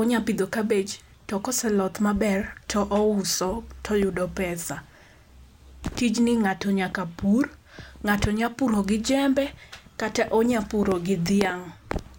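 No technical faults can be heard anywhere in the speech.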